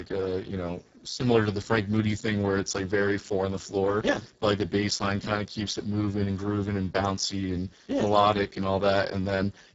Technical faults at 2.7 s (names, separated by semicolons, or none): Speex codec